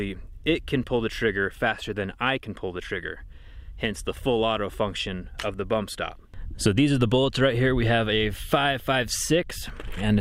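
No technical faults can be heard anywhere in the clip. Nothing in the audio calls for comment on timing, level or signal path.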